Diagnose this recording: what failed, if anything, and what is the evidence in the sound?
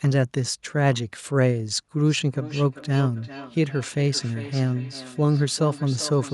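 Call processing failed, through feedback echo between two devices. From 2.05 s to the end, the speech comes back roughly every 0.4 s, thin and ringing, peaking at about 16 dB below the speech. A nearby device replays the call into a microphone, and neither echo canceller removes the other device's output.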